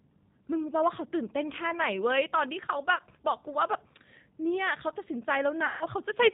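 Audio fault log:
Throughout, G.729 codec: speech is rebuilt from a vocal tract filter, pitch predictor and sparse pulses at a rate that suggests 8 kbit/s, so it sounds rough, synthetic and dull above 4 kHz.
2.96–3.01 s and 5.66–5.87 s, VoIP packet loss concealed by the speech codec: about 30 ms, then 150 ms, of audio went missing, and the decoder extended its last pitch and filter with falling gain. The sound becomes a fading buzzy or noisy smear, with the second gap longer.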